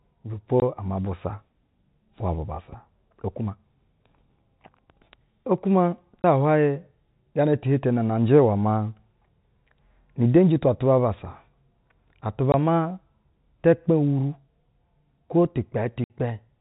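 Speech over a G.711 telephone path, with its 4 kHz ceiling, is broken by packet loss filled with silence: 20 ms flat gaps at 0.60–0.62, 6.22–6.24 and 12.52–12.54 s, plus 60 ms at 16.04–16.10 s. The longer gap fits three lost 20 ms packets. Each shows as a blank vertical stripe on a spectrogram and a hard-edged flatline on the waveform.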